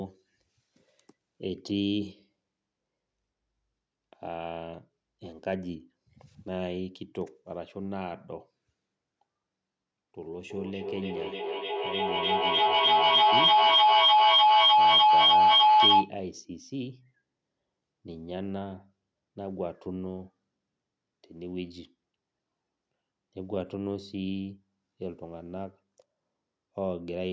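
From 10.5 to 16.17 s, feedback howl: a room loop gaining level per pass rings near 1 kHz, about 13 dB over speech, with a loop delay of roughly 300 ms.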